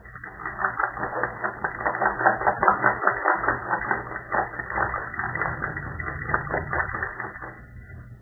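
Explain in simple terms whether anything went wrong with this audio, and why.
Throughout, nothing is heard above 2 kHz, likely from low-bitrate audio saved at a high bitrate. The large file still cannot restore what the first encoding removed.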